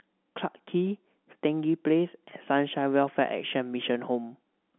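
No technical faults are audible.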